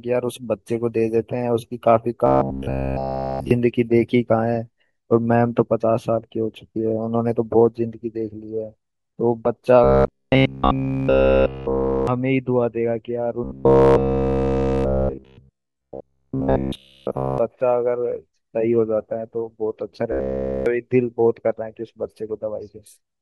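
From 2.26 to 3.51 s, 9.84 to 12.07 s, 13.44 to 17.38 s and 20.12 to 20.66 s, the speech turns into a rigid metallic buzz at 66.7 Hz: robotic sound from repeated short buffers, likely because a segment of about 15 ms was looped while essentially all the real audio was skipped. A spectrogram shows evenly spaced harmonic stripes at multiples of 66.7 Hz, and the waveform shows one short shape repeating every 15 ms.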